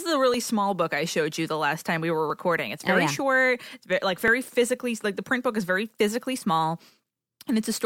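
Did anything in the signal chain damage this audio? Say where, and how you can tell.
Yes. The damage is at the driver or buffer stage. Right after "is a", at 0.34 s, a click appears. It recurs about every 1.97 s, roughly four times in all, through 6.24 s. The spacing is steady and the clicks ride on the speech. This is the pattern of clock drift buffer slips. Two devices likely run on separate clocks that differ by about 500 ppm. The buffer between them drifts until a block of a few dozen samples is dropped or repeated, and each slip is heard as a click.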